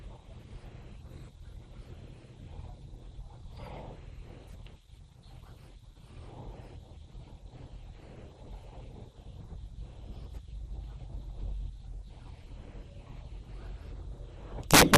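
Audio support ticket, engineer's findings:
MP2 compression, throughout: dull, granular, gurgling speech; upper sub-bands starved of bits and switching off, coarse quantisation in the rest. Likely an MP2 stream of around 80 kbps.

DAB burbling, 4.35–4.42 s and 9.18 s: brief blips of noise; residual bit errors at a low rate corrupting samples in the MP2 frames, noise in individual sub-bands.

Integer overflow, 14.71–14.98 s: harsh cracks on loud speech, sharper than clipping. Gain stage about 11 dB over full scale, wrapping peaks to opposite sign instead of limiting.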